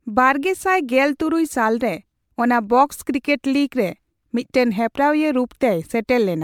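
Throughout this speech recording the sound has a swirly, smeared, hollow quality, with consonant attacks blurred and a watery texture that seems worse than a single lossy encode should leave. Nothing is present above 19.8 kHz. This is likely generation loss: repeated MP3 decoding and re-encoding, around seven passes at what sounds like 128 kbit/s, each quantising on a shifted frame grid so the noise and spectral holes accumulate.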